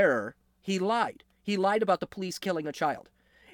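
At about 0.99 s the speech turns into a time-stretched section that runs to the end of the clip. The pace jumps abruptly to about 1.35 times normal speed. The pitch does not rise with it. The delivery sounds rushed. The likely cause is software that squeezed this part to fit a shorter length. It kept the pitch by dropping short pieces of the signal.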